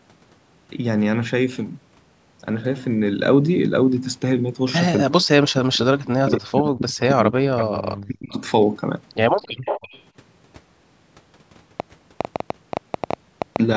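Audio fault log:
5.04 to 8.4 s, speech suppressed in double talk: the echo canceller likely mistook speech for loudspeaker echo, so the speech dips by up to around 40 dB for about three seconds overall.
7.59 to 7.65 s and 9.36 to 10.01 s, echo leak: the far-end echo canceller likely left residue, so a copy of the speech returns 275 ms late, roughly 10 dB quieter.
9.51 to 9.58 s, background gated by the echo canceller: the canceller clamped the microphone while the loudspeaker played, so the room sound drops about 40 dB for 70 ms.
11.8 to 13.57 s, train of clicks: pulses likely from interference or a faulty connection give about 15 similar clicks at an uneven 7.4 per second, peaking roughly 15 dB above the sound.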